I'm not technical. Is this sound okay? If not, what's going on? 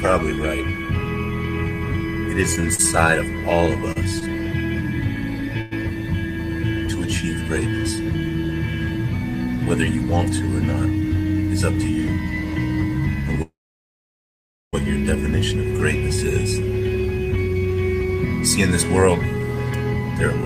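No. Between 2.55 and 5.73 s there are scattered short gaps. About seven small bits of sound went missing or arrived late on their way to the listener, the longest about a tenth of a second. Each time, the receiving end covered the hole by stretching out the sound just before it. You hear brief ticks, little smears or hiccups scattered through those three seconds, while the sound around them stays clear.

From 13.42 to 14.75 s the sound stops for about 1.3 seconds, and about 1.2 seconds of that is plain silence. It then carries on exactly where it left off, so nothing is lost, but everything after it arrives that much later. This is likely a call audio freeze: the incoming sound was held up along the way, the receiver ran out of sound to play, and it waited.

There are two stretches of jitter buffer speed-up, from 11.01 to 12.54 s and from 17.17 to 19.08 s. The receiver had built up more stored sound than it wanted, which made playback lag behind. 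To catch up, it snipped out many tiny slices, about 50 milliseconds in total in the first stretch and about 100 in the second. The sound runs about 3% and then 5% fast, with no change in pitch, so it can feel slightly hurried.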